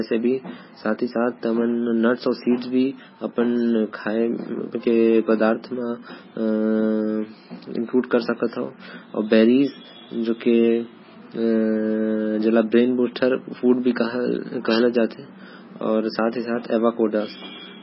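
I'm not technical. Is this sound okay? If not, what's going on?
No. The recording was likely squeezed hard by MP3 compression, so throughout it loses everything above 5.6 kHz and sounds watery and swirly, with smeared, chirpy s sounds.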